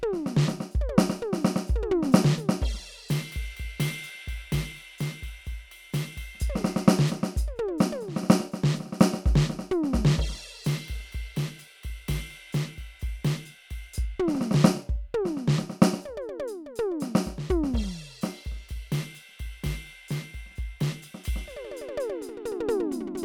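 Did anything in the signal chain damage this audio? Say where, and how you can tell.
No, nothing in the chain audibly damaged this music.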